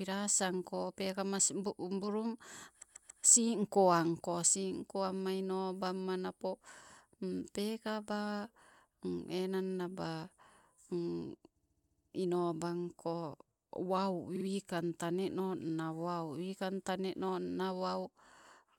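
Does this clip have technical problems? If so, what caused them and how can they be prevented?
Yes, there are repeated frames: a short run of compressed frames was written or sent more than once, so the decoder replays it. At 2.81–3.23 s a 139 ms block plays three extra times just before "singko anko singko amma". At 11.61–12.10 s a 70 ms block repeats seven times. At 14.35–14.45 s a 46 ms block repeats twice. Each stutters and lengthens the clip by 418, 488 and 93 ms. Checking sequence numbers and dropping duplicate frames before decoding prevents this.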